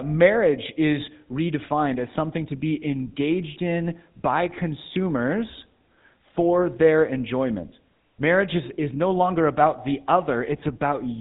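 Speech run through the GSM full-rate codec from start to finish, and the damage is easy to hear. The voice has that buzzy, gravelly roughness you get when a vocal-tract model is driven by a sparse, regularly spaced pulse train instead of the real excitation, and nothing survives above 3.8 kHz, so it sounds dull and phone-like. The coarseness fits the old 13 kbps full-rate mode.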